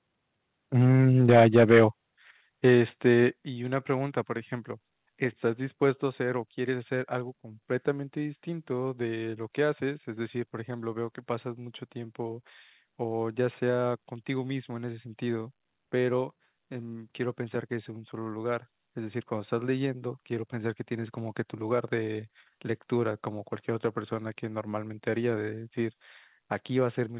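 Speech over a call line that cuts off around 4 kHz, which fits G.711 A-law telephone coding. There's microphone overload from 1.28 to 1.85 s, peaks about 6 dB over the converter's limit with a fair share of samples flattened, and a lighter touch at 2.67–2.74 s, likely input gain set too high. The microphone volume stepped down at 1.3 s (3 dB), 2.31 s (7 dB), 3.33 s (6 dB) and 5.97 s (2 dB), sudden level drops, probably the call software's gain control backing off.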